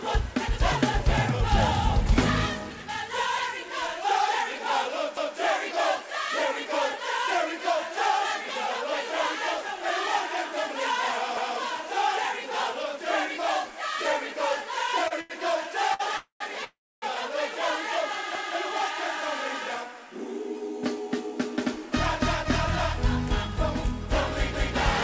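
The audio carries overlapping chunks at 5.17, 11.37, 18.35 and 24.55 s. Each join replays about 200 ms of sound as a stutter, which points to 6 s chunks that start before the previous one finishes. That regular spacing and the repeated material set it apart from the stalls, which repeat nothing. Short stalls from late packets at 15.08, 15.21 and 15.94 s hold the current sound for 28, 90 and 56 ms with a faint buzz or dip, then carry on with nothing lost. Two call audio freezes follow, at 16.17–16.42 s and 16.64–17.04 s. Unlike the stalls, the held sound fades out and drops to silence for about 120 and 280 ms, likely because delayed packets left the jitter buffer empty, before resuming where it stopped. Throughout, nothing sits above 8 kHz, which fits a G.722 call path at 64 kbps.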